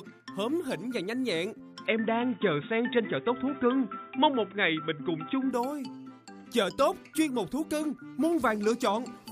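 The recording input likely switched to a poorer device from 1.86 s to 5.51 s, then switched back. During that stretch the audio loses everything above 3.8 kHz, so it turns dull and boxy. Its level shifts modestly, and a faint new background noise sits well below the signal. Both changes happen at once with no gap of silence at either switch, and full brightness returns abruptly at 5.51 s.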